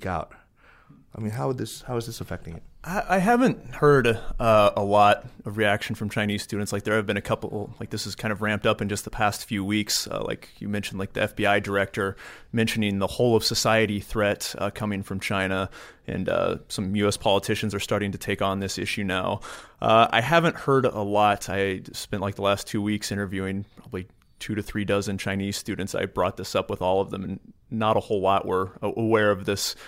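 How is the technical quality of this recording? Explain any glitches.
Nothing stood out as a glitch or technical problem when listening to this recording.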